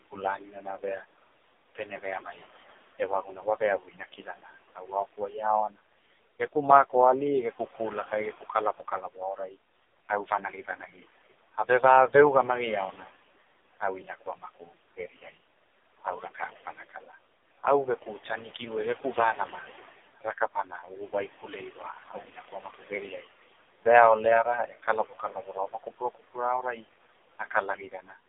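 The clip is speech carried over a phone-type path. Noise suppressor artifacts run through the whole clip. The room noise, about 17 dB under the speech, is pulled down by about 18 dB between phrases and rises back under them. The AMR narrowband mobile codec also colours everything. Nothing above about 3.8 kHz survives, and the band sits roughly from 300 Hz to 3.6 kHz. The voice sounds buzzy and synthetic, with heavy coding damage that fits a low AMR rate, near 5.15 kbps. From 0 to 11.58 s, there is speech cut by the noise suppressor. Soft consonants and word endings drop by up to about 17 dB along with the background. They sound swallowed, adding up to around two seconds.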